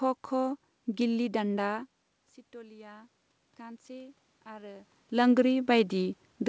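Speech over a call path whose 8 kHz band limit fits a wideband codec such as G.722. Automatic gain rising runs from 2.52 to 4.96 s: after the input dropped by about 20 dB, the gain control gradually lifts voice and room noise together by about 6 dB.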